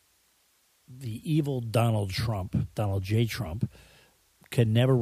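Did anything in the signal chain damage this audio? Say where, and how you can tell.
No, no stage of the signal chain has left an audible mark on this speech, and nothing in it points to damage anywhere along the path.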